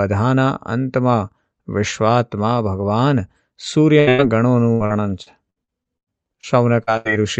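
At 3.99 s a burst of packet loss begins. A second burst follows straight on, from 4.09 to 4.20 s. Together about 180 ms of the call failed to arrive in time. The receiver kept extending the last sound and let it fade. So the speech turns into a held buzz or a dying hiss. It then picks up further on, with that stretch gone.

From 4.72 to 6.45 s comes repeated packet loss, heard as robotic sound. There are nine separate holes here. The longest lasts about 98 ms. Roughly a fifth of this span is patched rather than real. Each patch repeats the last sound, and the next hole arrives soon after. The result is choppy speech with pieces cut out. Through this the Opus call path keeps its 8 kHz upper limit.

At 6.83 s there is short concealed packet loss, about 40 ms long. The decoder got nothing for that moment. It filled the hole by carrying the last sound forward, then blended back. This is heard as a brief smear or wobble. 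A quick consonant there could disappear entirely.

At 6.97 s another burst of packet loss starts, ending at 7.07 s. About 80 ms went missing. The concealment stretches the last sound and fades it down. So the speech briefly holds or hisses, then jumps ahead.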